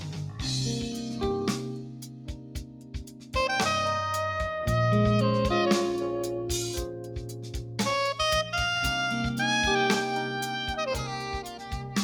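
A speech-tuned noise suppressor was left running on non-speech material. It treats steady tones and decaying tails as noise, so the level pumps and thins throughout, swinging by roughly 10 dB as sustained parts are pulled down while onsets pass. At several points the noise suppressor turned sound down further, pushing held or fading material well below its surroundings: 0.0–0.42 s (about 7 dB), 1.57–3.34 s (about 9 dB), 6.92–7.79 s (about 7 dB) and 11.48–11.96 s (about 6 dB).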